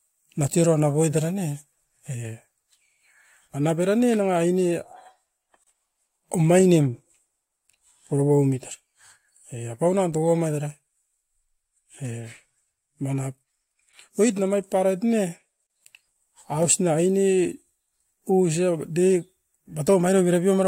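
A gap at a join of encoded pieces opens at 5.64 to 5.67 s and again at 15.67 to 15.70 s, ten seconds apart: a 31 ms gap with smeared edges, left by encoder start delay and last-frame padding when separately encoded speech segments were joined untrimmed.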